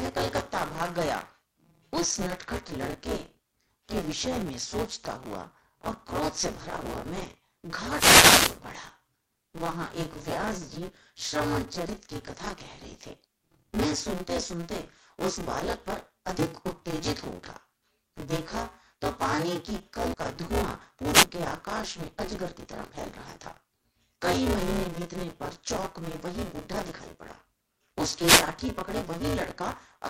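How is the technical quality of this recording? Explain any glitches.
The recording has two clear technical problems: a constant mechanical buzz on the speech and three brief bursts of radio static.

Buffer tearing runs through the whole clip. The playback writer and the hardware reader have drifted so that they cross inside every period. Roughly half of each buffer repeats audio from about 20 ms earlier, with hard joins on both sides. This produces a robotic rattle at 172 Hz, which fits a 256-sample buffer. It stops in pauses, unlike steady hum.

Wireless microphone noise hits occur from 7.87 to 8.59 s, from 21.12 to 21.23 s, and from 28.22 to 28.47 s. The FM microphone's radio signal faded as reflections cancelled, so receiver noise swelled over the speech as short swishes of static. Each one is an isolated burst, not the periodic rattle of the tearing.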